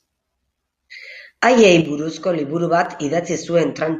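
From 0.85 s to about 3.86 s, a click recurs at a steady 1.0 s interval, about four times in all, each a brief tick cutting into the speech. This regular spacing points to clock drift buffer slips, likely caused by two devices running on independent clocks that disagree by something on the order of 150 ppm. The buffer between them drifts until a handful of samples, roughly seven, is dropped or repeated, and each such jump is the click.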